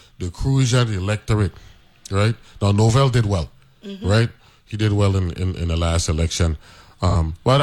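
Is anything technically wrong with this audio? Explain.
Yes. At 7.09 to 7.15 s, just after "in the last election", AAC frame loss with concealment rebuilds a lost frame of about 43 ms from the previous spectrum, leaving a smeared, noisy patch instead of the silent gap of a plain dropout.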